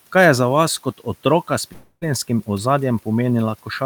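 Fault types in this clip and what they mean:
long network dropout: At 1.73 s, audio likely stops arriving. The last sound fades out as a buzz or hiss, then brief silence. Speech returns at 2.03 s, with 0.3 s lost.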